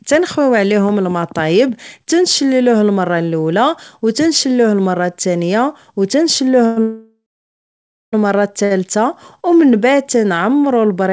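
At 6.66 s the sound hangs for about 0.1 s, then again from 6.82 to 8.15 s, a 1.3 s break in which the last sound decays into about 0.9 s of silence. This is a call audio freeze, likely from packets held up in transit. The speech resumes exactly where it stopped, with nothing skipped, unlike a dropout.

At 8.65 s comes a short stall from a late packet. For about 60 ms one sound is stretched before continuing from the same place. It is far briefer than the freeze and never reaches silence.

From 9.37 to 9.71 s a jitter buffer slow-down plays the speech at about 89% speed, adding 43 ms. Repeated pitch periods draw sounds out at unchanged pitch, spread smoothly rather than as one held stall. Throughout, the G.722 call path leaves nothing above 8 kHz.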